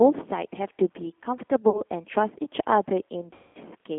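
Speech passes through a G.729 codec whose sound fits the 8 kbit/s G.729A variant. It rebuilds each 10 ms frame from a vocal tract filter, pitch predictor and sparse pulses, on a line band of 200 Hz to 3.5 kHz, so the voice is plainly rough, synthetic and thin. VoIP packet loss concealed by the speech codec strikes twice. At 1.70 to 1.82 s, 40 ms of audio is lost, roughly two packets. At 3.33 to 3.58 s, 220 ms is lost, which fits about eleven packets. Each time the decoder stretches its last frame into a buzzy tone or coloured noise that fades, and the voice stays weak or distorted briefly after packets return.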